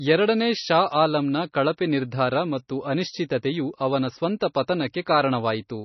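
A short speech clip with heavy codec damage all the way through. Nothing is heard above 6 kHz, so the treble is cut off sharply. Weak detail flickers in and out between frames, which gives a watery, swirling texture. Sibilants turn metallic and attacks smear. This is likely MP3 compression, starved of bits, which fits a bitrate around 24 kbps. The encoder drops the top band and zeroes quiet lines to save data. At 4.40 s there is pre-echo. A short hiss arrives about 14 ms before a sharp onset, and the attack itself sounds softened. The codec spreads its noise across a whole block. The noise sized for the loud attack also fills the quiet gap just before it.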